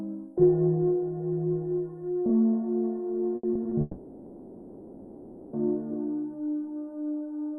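A music clip with two network faults in close succession. From 3.35 to 3.73 s there is repeated packet loss with a robotic sound: four short holes, the longest 80 ms and 140 ms in total, are each patched by extending the preceding sound. About 37% of that stretch is concealment, so the music turns choppy. On a spectrogram this looks like brief blocks of frozen, smeared harmonics cutting into the normal texture. In the waveform it appears as short repeated-looking segments. Then, from 3.81 to 5.55 s, the music is replaced for 1.72 s by a continued, decaying imitation of the last sound, and the real content from that span never returns. There is no true silence in it. This is likely a long network dropout. On a spectrogram the band structure stops evolving and fades into a flat, static smear until normal detail resumes at 5.55 s. The waveform shows a steadily shrinking envelope with no new attacks.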